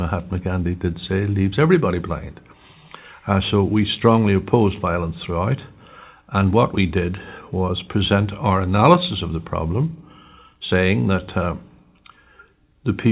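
No technical faults can be heard in the signal, which carries the narrowband character of a telephone-grade call path with nothing above 4 kHz, consistent with G.711 mu-law coding.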